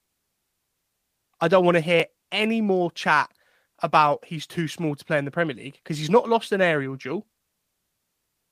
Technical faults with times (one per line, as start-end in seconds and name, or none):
1.41 electrical switching spike
2.00 block of digital silence